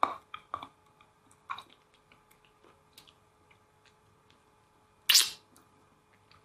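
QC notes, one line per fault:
No faults were heard in this clip. There is nothing to log.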